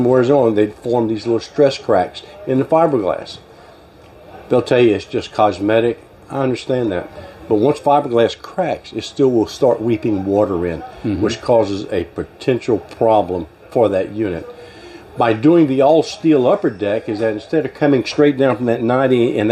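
No technical faults can be heard anywhere in this audio.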